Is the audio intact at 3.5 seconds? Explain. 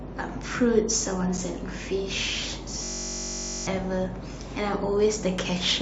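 No. At 3.5 seconds the speech is replaced by a system hang loop running from 2.84 to 3.67 s. The system stalled while the playback hardware kept cycling one buffer. A single 21.33 ms slice repeats dozens of times, which fits a 1024-sample buffer. Because the loop is so short, it sounds like a steady buzz at about 46.9 Hz. Roughly 0.7 s of the real speech never plays.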